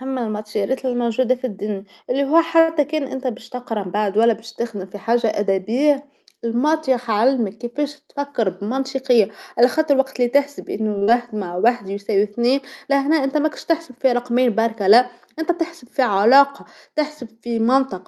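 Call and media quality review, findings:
Short stall from a late packet at 2.59–2.70 s and 10.98–11.03 s. Jitter buffer underrun: the last sound is held for 89 ms and then 35 ms, with a slight buzz or dip, and resumes where it left off. Unlike loss, no audio is missing; only the delay grows.

Short concealed packet loss at 11.03–11.09 s, straight after the second stall. 40 ms of audio never arrived, and the decoder extrapolated the previous sound before crossfading back, leaving a brief smear. It differs from a stall because content is actually gone, not held.

Jitter buffer speed-up at 8.01–9.27 s (106%, about a tenth of a second removed) and 17.41–17.83 s (111%, about 50 ms removed). Repeated removal of pitch periods drains excess buffered delay. The sound is hurried but its pitch is unchanged, unlike a resampling fault. The Opus call path adds its usual coding noise and a band limit near 12 kHz.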